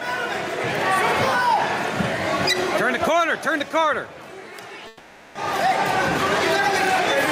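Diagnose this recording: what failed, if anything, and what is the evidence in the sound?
Call processing: the input gain is likely set far too high for the microphone, so a fast limiter or compressor clamps down on every loud sound throughout. The background swells in the gaps and ducks by around 5 dB under each peak, squashing loud and soft parts together.

Network: a long network dropout from 4.87 to 5.38 s, likely packets that never arrived. For about 480 ms the receiver stretches the last sound into a fading buzz or hiss instead of real audio, with no true silence, and playback resumes later with that stretch gone.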